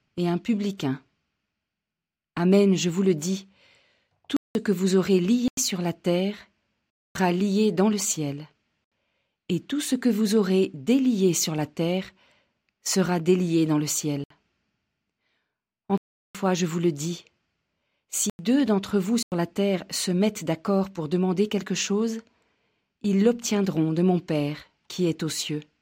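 The speech cuts abruptly to dead silence eight times. The gaps fall at 4.37 s (0.19 s long), 5.48 s (0.09 s), 6.90 s (0.25 s), 8.84 s (0.07 s), 14.24 s (0.06 s), 15.98 s (0.37 s), 18.30 s (0.09 s) and 19.23 s (0.09 s). Each is a block of digital silence, likely where the output buffer wasn't filled in time and was played as zeros. Several of the gap lengths fit buffers of 4096, 8192 and 16384 samples.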